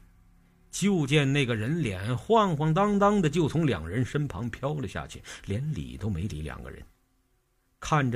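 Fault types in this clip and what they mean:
Nothing stood out on listening; no technical fault could be heard anywhere in the audio.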